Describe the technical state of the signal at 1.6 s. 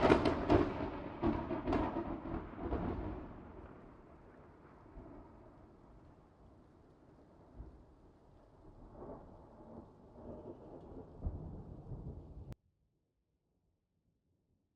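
At 1.6 s the sound is intact, with no dropout, click, distortion or other fault audible at that moment.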